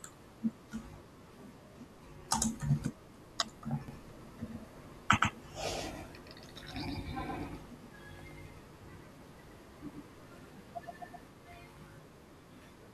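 Speech with a doubled audio track from 3.88 to 11.28 s: a full-band copy about 5 dB quieter trails by roughly a tenth of a second, starting and stopping abruptly, likely from a slower second capture path. It appears as an offset repeat of every waveform burst and spectrogram stripe.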